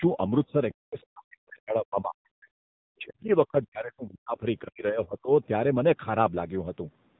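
AMR narrowband mobile codec damage runs throughout the speech. The codec resynthesises the voice from a vocal-tract model and sparse pulses, leaving nothing above 3.8 kHz, plus a plainly audible buzzy, synthetic edge. That coarseness fits a low mode around 7.4 kbps.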